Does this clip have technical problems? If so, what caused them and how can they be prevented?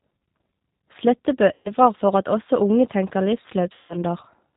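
Yes. The whole recording carries G.729 codec damage: the speech sounds rough and slightly synthetic, with nothing above 4 kHz, which fits an 8 kbit/s G.729 link rebuilding the voice from a filter and a few pulses per frame. A wideband codec or higher-bitrate path avoids it.

There's also VoIP packet loss concealed by the speech codec, at 1.54 to 1.71 s and again at 3.74 to 3.99 s, right after "at også unge tenker". The decoder stretches the last sound into a fading buzzy tone or coloured noise, about 110 ms and 150 ms long. A steadier network or a bigger jitter buffer would prevent it.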